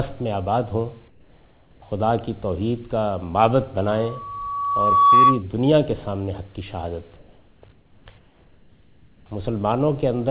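At 1.08 to 1.82 s the real background drops out and a flat, featureless hiss takes its place, about 6 dB quieter. That's comfort noise in place of the background, most likely discontinuous transmission: the sender stopped sending during the pause, and the receiver filled the gap with synthetic noise roughly matched to a background sitting about 33 dB under the loud parts. It happens again at 7.16 to 7.62 s, 7.72 to 8.06 s and 8.18 to 9.26 s, each time with that same dull swap and a dip of about 4 to 6 dB.

In between, from 3.89 to 5.43 s, there's a loudspeaker feedback squeal. A 1.1 kHz tone swells over roughly a second and a half to end up around 10 dB above the wanted sound. The microphone was catching the speaker it feeds, and at that one frequency the loop gain went over one, so the tone kept feeding itself. Throughout, nothing is heard above 4 kHz, which points to a narrowband call codec like G.711.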